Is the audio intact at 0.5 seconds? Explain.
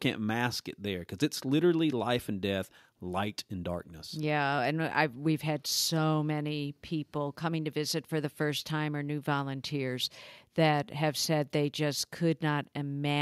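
Yes, at 0.5 seconds the speech is intact, with no audible fault at that moment.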